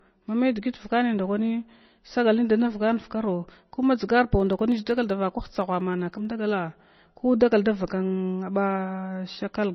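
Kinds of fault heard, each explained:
MP3 compression: the speech sounds watery and swirly throughout, with nothing above about 5.9 kHz, which fits a low bitrate around 24 kbps, likely from heavy MP3 encoding. Unlike a simple low-pass filter, weak frequency components flicker on and off between frames, giving the swirl.
Periodic USB or driver dropouts: from 4.40 to 6.25 s, tiny slivers of audio, roughly a tenth of a millisecond each, are skipped about every 64 ms, giving some thirty evenly spaced ticks. Their strict regularity and presence only during sound set them apart from random clicks or codec artefacts.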